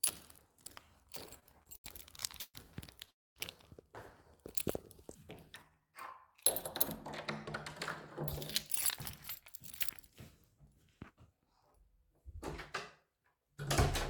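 From 1.39 to 2.56 s there's a run of repeated stalls, a stutter: nine little hang-ups where packets arrived late, the jitter buffer kept running dry, and the receiver stretched the last sound to cover. That adds up to about 0.32 s of filler, the longest about 130 ms, about 28% of that stretch. Nothing is lost, but it drags and jerks.

At 3.11 s the audio stops for about 0.25 s and picks up again at 3.38 s, mostly dead silence in between. That's a call audio freeze, likely packets held up long enough to empty the buffer. Nothing is skipped, so everything after lands about 250 ms later.

At 5.70 to 5.93 s a jitter buffer slow-down kicks in. The buffer was low, so the receiver repeated tiny pitch-period-sized pieces to rebuild its reserve, adding about 52 ms. Playback drops to 81% speed with the pitch unchanged, so the sound briefly drawls.

Then two jitter buffer speed-ups, where the buffer was holding too much and the receiver trimmed short pitch-period slices to cut delay. 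From 11.0 to 12.2 s it runs at 105% speed, shedding around 70 ms. From 13.02 to 13.65 s it runs at 108%, shedding around 50 ms. Pitch stays put, but both passages feel a touch rushed.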